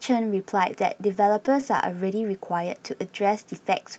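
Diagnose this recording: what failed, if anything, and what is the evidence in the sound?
The network stage failed, causing scattered short gaps between 0.97 and 1.81 s. About five brief holes, none much over 15 ms, show up as small ticks and smears. The receiver concealed each by extending the preceding sound, patching roughly 50 ms.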